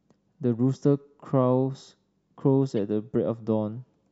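A speech recording with a corrupt frame decoded at 2.70 to 2.72 s: a brief, fairly quiet burst of misplaced energy, peaking around -35 dBFS, lasting only a few codec frames. Flipped bits in the compressed data led the decoder to apply wrong gains or misread spectral codes, so energy landed at frequencies it shouldn't. Unlike packet-loss concealment, which smears or repeats sound to fill a gap, this burst is new junk that doesn't belong to the surrounding audio.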